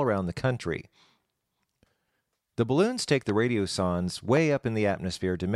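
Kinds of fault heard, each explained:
Loud pop: Two single sharp pops, each about 20 ms long, jump out at 3.29 s and 4.37 s, roughly 10 dB above the speech, which carries on underneath. Each is likely a brief voltage spike, such as static or a switch glitch, entering the signal path.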